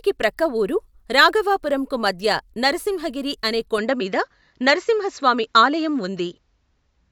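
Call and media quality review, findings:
Input switched to a poorer device, 3.78 s to end, right after "రాఘవాపురంకు మధ్య నరసింహగిరి అనే": speech turns duller, nothing above 7.6 kHz, level shifts around 5 dB, new faint noise floor. Likely a microphone or headset change. Tone, level and noise all change together with no gap, unlike a bandwidth-only codec switch.

Compressed frames skipped at 4.00 s, same landmark: a brief jump where about 20 ms of audio is skipped ahead, consistent with one lost frame of roughly 23 ms in the decoder path.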